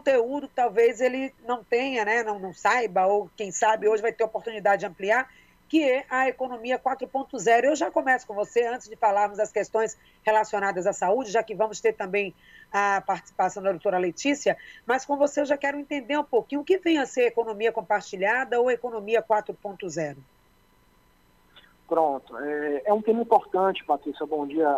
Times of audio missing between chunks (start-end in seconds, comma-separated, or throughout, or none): none